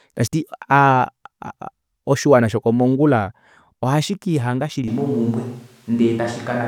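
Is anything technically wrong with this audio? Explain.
Yes. From 4.88 s, right after "oshiwana shokomongula ohashikihanga", the speech suddenly turns roomy and hollow, with thinner bass, and stays that way to the end. The overall level hardly changes, but a background of room noise sits roughly 35 dB below the speech. This is likely a switch to a distant microphone: the close microphone's feed dropped out, and the recording fell back on one farther away that picks up the room's reflections and ambience.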